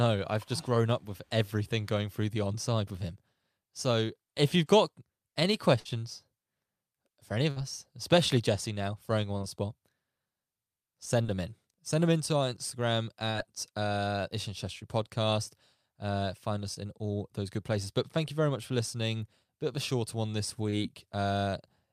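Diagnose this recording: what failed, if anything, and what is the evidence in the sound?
The network stage failed, causing two bursts of packet loss: 5.79 to 5.87 s, after "if you've got any", and 7.51 to 7.58 s, after "for any of". Each time about 60 ms went missing. The receiver continued the last sound and faded it before jumping ahead. A spectrogram shows a tapering continuation ending in an abrupt discontinuity.

Short concealed packet loss, also a network fault, occurs at 9.38, 11.22, 13.31, 16.74 (just before "in all those good") and 20.70 s. Each drops 20 to 40 ms, which the receiver bridges by extrapolating pitch or noise, producing brief smears. The waveform shows short stretches of extrapolated signal blending back into the real audio.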